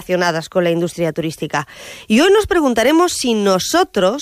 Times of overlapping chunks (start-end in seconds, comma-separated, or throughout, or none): none